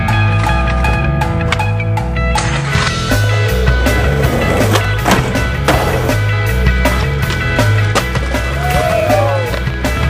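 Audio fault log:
8.16–9.98 s, train of clicks: a run of roughly ten similar clicks, about 6.1 per second at an uneven pace, ticks over the sound with peaks around 5 dB above it. The likely cause is interference from nearby equipment or a faulty connection or power supply injecting repeated pulses. A waveform shows narrow spikes of much the same shape jutting above the envelope. A spectrogram shows thin vertical broadband lines at irregular intervals across this stretch.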